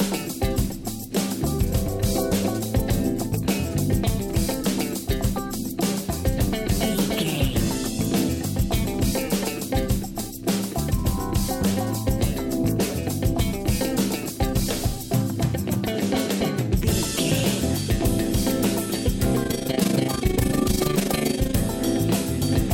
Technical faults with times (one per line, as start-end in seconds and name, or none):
19.44-21.57 overlap-add ripple